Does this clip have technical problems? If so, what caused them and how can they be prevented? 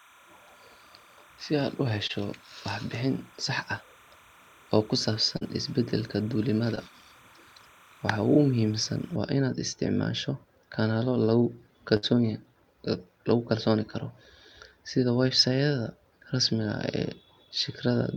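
Yes. Three kinds of fault can be heard.

Timecode bleed runs from the start to about 9.16 s: a steady chirping warble roughly 30 dB below the speech, switching between tones near 1 and 2 kHz. The 29.97 frames-per-second rate points to linear timecode leaking in from an adjacent track or cable. On a spectrogram it shows as two faint horizontal bands at those frequencies that stop abruptly at 9.16 s. Route timecode on separate, shielded cabling and mute that track in the mix.

Short concealed packet loss appears at 2.07–2.11 s, 5.37–5.43 s and 6.75–6.79 s. Roughly 20, 40 and 20 ms of audio never arrived, and the decoder bridged each gap by extending the preceding sound before blending back. Each one is heard as a brief smear or wobble. A waveform shows a short stretch of over-regular, repeated cycles, and a spectrogram shows a blurred, smoothed patch in place of normal detail. A larger jitter buffer, forward error correction or a steadier network connection would prevent these.

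A burst of packet loss occurs at 11.97–12.05 s, right after "inaad isticmaasho kanaalo lagu". About 60 ms went missing. The receiver held the last sound and faded it before the speech resumes further along with that stretch gone. On a spectrogram this appears as a frozen, flat patch that fades out, followed by an abrupt restart. Redundancy coding or prioritising audio traffic on the network would guard against this kind of burst.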